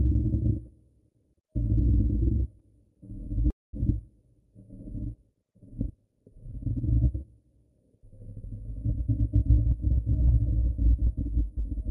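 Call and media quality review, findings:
3.50–3.76 s: sound stalls, last fragment smears into a fading buzz, then about 0.2 s of silence. Resumes where it stopped, nothing lost. Likely call audio freeze. Jitter buffer ran dry on delayed packets, adding roughly 0.23 s of delay.

5.25–6.95 s: pace jumps to about 1.88 times normal, pitch unchanged. Rushed texture from short pieces being dropped. Points to a time-stretched section. Software compressed the span to fit a length, keeping pitch while cutting duration.

9.71–11.80 s: about 2% fast, pitch steady. Jitter buffer speed-up. Receiver held excess buffered audio. It trimmed short pitch-period pieces repeatedly, around 50 ms in total, to pull latency back down.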